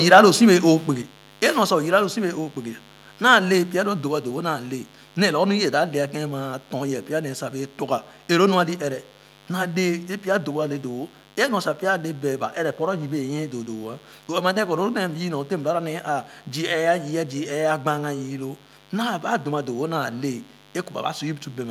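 Recorded speech runs the full length of the clip over a constant mains buzz: a steady, raspy hum at 50 Hz, sitting roughly 25 dB below the speech. Sharp switching spikes, twice per mains cycle, produce a dense ladder of harmonics stacked from 50 Hz well up into the kilohertz range. On a spectrogram it appears as evenly spaced horizontal lines across the whole clip, still visible in the pauses between phrases. From 0.12 to 0.2 s the opening peaks break up with a harsh, crackly edge, the sound of microphone overload. The input was likely driven about 3 dB past the converter's ceiling, so a few percent of the samples in that stretch are flattened at the converter's limit. In the waveform those peaks show squared-off tops instead of rounded crests, and the spectrogram shows brief vertical smears of broadband distortion energy. At 1.02 s the speech and the buzz underneath it drop together in a single step of about 4 dB, a microphone volume stepped down, likely by call software that reacted to the clipped peaks by cutting the device's input gain. 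The waveform envelope shrinks abruptly at that instant and stays smaller afterwards, and the spectrogram darkens slightly across all frequencies at once, hum lines included.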